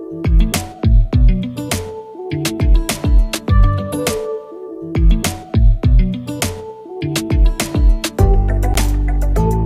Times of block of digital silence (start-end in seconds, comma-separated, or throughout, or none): 3.35, 8.74